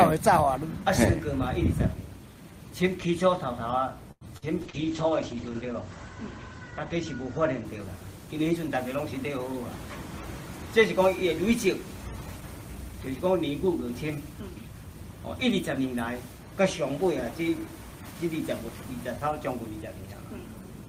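At 4.11 to 4.24 s a short stall from a late packet holds the last sound for about 98 ms until the packet arrives. The waveform shows a flat, repeated stretch, and the spectrogram shows frozen horizontal bands.

At 4.37 to 4.45 s a burst of packet loss drops about 40 ms. The receiver extends the previous sound, fading it out, then the audio jumps ahead; the spectrogram shows a dimming smear, then a sudden resume.

From 4.63 to 9.97 s a call bitrate drop cuts the encoder from 32 to 10 kbps, bottoming out for about a second. The top edge falls from 20 kHz to 8 kHz, so the sound turns muffled and watery, and the spectrogram is visibly empty above 8 kHz.

At 4.70 to 4.76 s, within that drop, a short concealed packet loss patches a 30 ms hole with synthesized sound. It is heard as a brief smear or wobble, and the spectrogram shows a blurred column with softened onsets.

At 12.40 to 12.90 s a jitter buffer speed-up trims about 50 ms of pitch periods, running roughly 9% fast at unchanged pitch. 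The audio sounds hurried.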